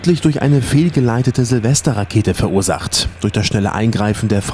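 No technical faults are audible.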